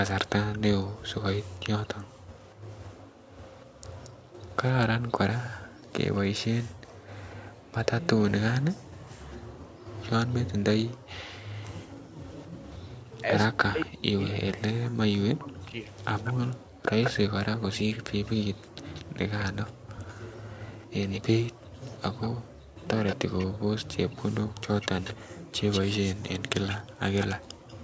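Echo leak runs from 0.53 s to the end: a copy of the speech returns about 228 ms late, roughly 10 dB below the direct voice. The likely cause is a far-end loudspeaker whose echo canceller let part of the microphone pickup through and sent it back.

Background gated by the echo canceller appears between 3.09 and 7.71 s. While the loudspeaker played, the canceller pulled the microphone down by about 40 dB, so the room sound drops out in brief holes totalling roughly 0.4 s, then returns.

The same gating recurs between 10.94 and 12.15 s, with dropouts adding up to about 0.2 s and again reaching about 40 dB. The background vanishes abruptly while echo is present and snaps back once the canceller releases.

Speech suppressed in double talk follows from 13.22 to 15.89 s. With both sides likely talking at once, the canceller could not separate its own talker from the echo and turned everything down. 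The voice dips very deeply and breaks up for about two seconds in total.

Background gating returns from 16.63 to 22.76 s, the longest stretch. The canceller again clamps the microphone by about 40 dB whenever the loudspeaker is active, leaving gaps in the room sound totalling roughly 0.7 s before it lets go.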